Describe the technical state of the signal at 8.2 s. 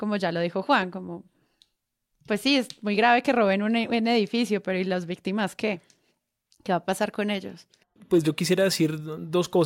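At 8.2 s the speech signal is intact, with no audible technical fault at that point.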